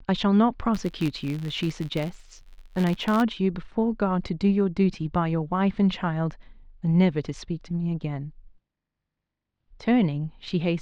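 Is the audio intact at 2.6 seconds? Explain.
No. At 2.6 seconds the speech sits inside a stretch of filter restarted on every block, running from 0.75 to 3.24 s. The filter discards its memory at each block boundary and starts again from silence, so every block opens with a small transient. Those clicks repeat at about 93.8 Hz, which fits a 512-sample block, and form a buzz beneath the speech that grows louder and quieter with the speech's level.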